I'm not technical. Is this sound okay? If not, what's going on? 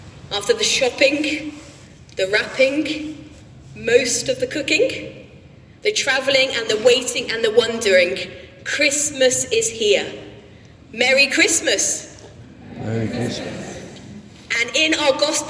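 Yes, no faults are audible.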